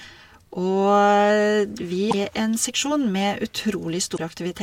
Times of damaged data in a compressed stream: 2.08-2.14, 4.14-4.19

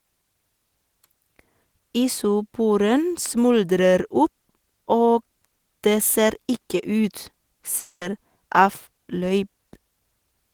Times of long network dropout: 7.79-8.03

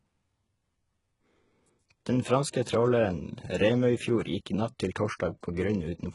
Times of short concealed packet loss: none

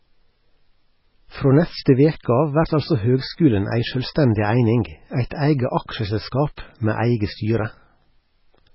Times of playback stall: none

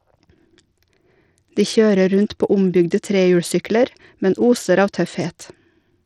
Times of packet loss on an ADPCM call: none

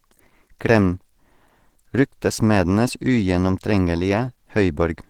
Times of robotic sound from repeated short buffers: none

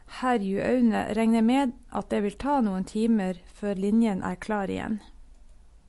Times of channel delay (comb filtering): none

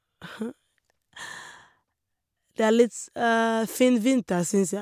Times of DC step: none

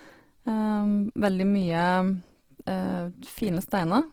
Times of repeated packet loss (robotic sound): none

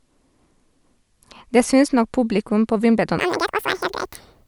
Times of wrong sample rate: 3.19-4.47

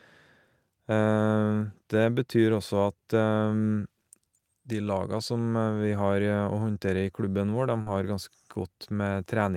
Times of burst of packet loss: 7.81-7.88

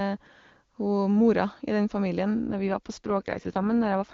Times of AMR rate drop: 2.48-4.14

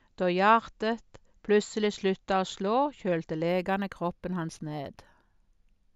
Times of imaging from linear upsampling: 3.48-5.96

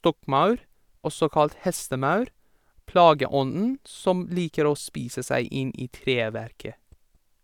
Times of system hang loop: none

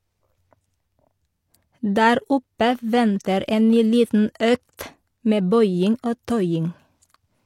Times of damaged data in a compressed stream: none

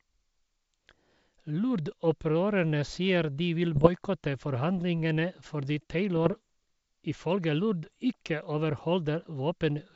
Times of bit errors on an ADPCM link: 3.76-3.89, 6.16-6.36, 7.84-7.97

